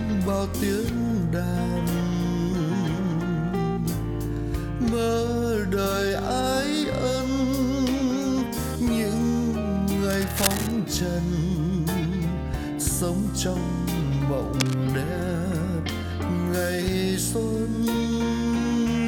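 A worn cable, connector or control being disturbed is the likely cause: its contact resistance jumps about irregularly and injects uneven bursts of noise into the path. The result is cable scratch noise, first from 10.10 to 10.72 s as a rough scratching rustle, then again briefly from 14.58 to 14.74 s. Both bursts sit only a few decibels below the wanted sound, so they come through clearly over it.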